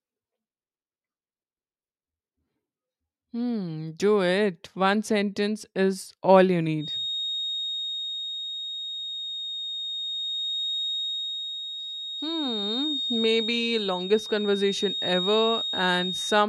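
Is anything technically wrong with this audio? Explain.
Yes. A feedback whistle starts at 6.76 s, just after "sentence is all you", and lasts to the end. The loudspeaker-to-microphone loop is likely sitting at the edge of feedback, sustaining a thin, slowly swelling and fading 3.7 kHz tone only a little below the speech level.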